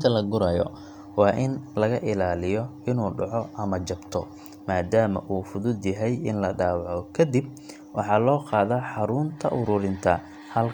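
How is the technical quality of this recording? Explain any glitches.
Nothing stood out on listening to this recording; no glitches were heard at any point.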